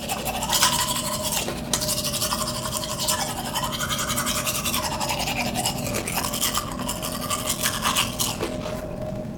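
Everyday sound, with a block size mismatch (padded) from 5.84 s to the end: short zero-filled gaps cause a 43.1 Hz buzz, fitting 1024-sample reads. Audio slows to 0.861× speed with its timbre unchanged. The waveform shows regular flat runs, and the spectrogram shows evenly spaced vertical gaps.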